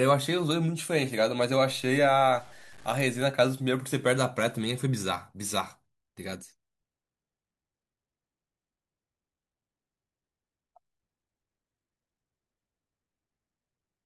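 A speech clip in which, from 1.71 s to 3.22 s, the sound turns grainy and gritty, with a rough distortion that rises and falls with the speech itself and breaks up most on the quietest parts. The likely cause is low bit depth without dither: the signal seems reduced to about 7 bits by truncation, so the rounding error tracks the waveform instead of forming a steady hiss, sitting only around 30 dB below the speech.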